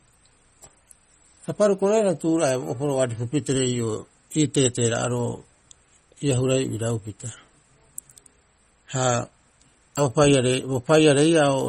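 Throughout the recording, the likely cause is heavy MP3 compression at a bitrate low enough to point to around 32 kbps. The encoder ran short of bits, so it zeroed weaker frequency lines that then flickered on and off between frames, and nothing survives above 16 kHz. The damage is plainly audible across the speech: a watery, swirling texture, metallic chirping on s sounds, and consonant attacks that smear rather than land crisply.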